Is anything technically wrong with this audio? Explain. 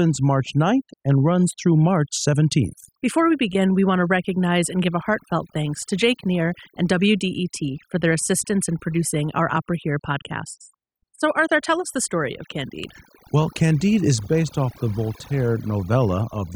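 Yes. Throughout the speech, the background drops and breaks up into twinkling specks. This is overdone noise removal: an over-strong noise reducer shut down frequency bands near its noise estimate, stripping quieter voice detail along with the noise.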